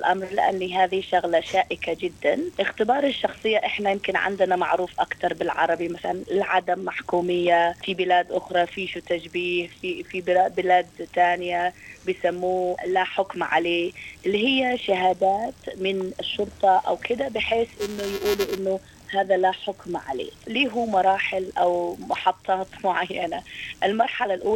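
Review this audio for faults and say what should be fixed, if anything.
From 17.78 to 18.58 s there is buffer tearing, heard as a robotic buzz at 345 Hz that rides on the sound for under a second. The buzz rate fits a 128-sample buffer. The writing side and the hardware read pointer have slipped against each other, so every period contains a small slice of audio from roughly ten milliseconds earlier, butted against current audio with hard joins on both sides. Those repeated discontinuities produce the periodic rattle. To prevent it, keep the writer at least one full period ahead of the read pointer, and resynchronise or restart the stream whenever an underrun or pointer slip is detected.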